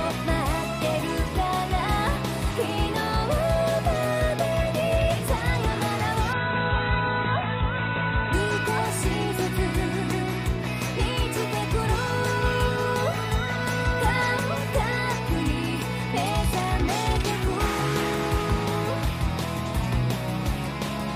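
From 6.33 to 8.33 s the adaptive stream drops to a lower bitrate, MP3 at 16 kbit/s, so everything above 4 kHz vanishes and artefacts swell, with no gap.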